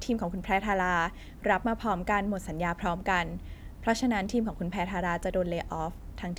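No technical faults can be heard anywhere in the recording.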